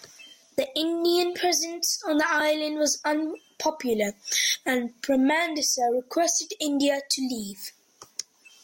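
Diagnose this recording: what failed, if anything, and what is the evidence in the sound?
A single sharp click at 2.22 s in this speech is likely dropped samples at the driver or buffer stage. A fraction of a millisecond of signal vanishes, so the waveform steps abruptly from one value to a later one with no time missing to the ear. On a spectrogram it appears as one thin vertical line running through all frequencies; in the waveform it is a visible discontinuity.

Two brief noisy smears at 2.40 s and 7.63 s point to lost LE Audio frames on the Bluetooth link, each gap 7.5 ms long, which fits one missing LC3 frame. The decoder hides the gap by reusing the previous spectrum with randomised signs, so any tonal structure in the speech becomes a short hiss-like wash. On a spectrogram, harmonics blur into diffuse noise for that span; the waveform shows loss of periodicity rather than silence.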